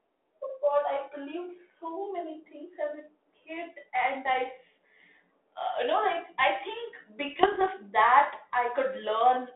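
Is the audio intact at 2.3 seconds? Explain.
Yes, at 2.3 seconds the speech is intact, with no dropout, click or distortion, only the steady narrow telephone-band sound of a G.726 ADPCM link at 32 kbit/s.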